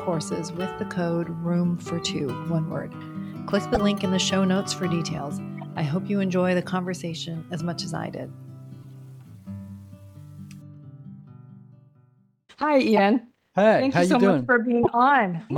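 Short chirps and bursts of noise break into the audio at 2.03, 3.74–3.77, 5.58–5.63, 7.14, 8.82–8.89, 12.97–12.99 and 14.83–14.88 s. They range from faint bursts near 2.03 and 7.14 s to loud bursts at 3.7 and 14.8 s. This is a corrupt frame decoded: flipped bits in the compressed stream led the decoder to place energy at the wrong frequencies, and each burst lasts about as long as one to a few damaged frames.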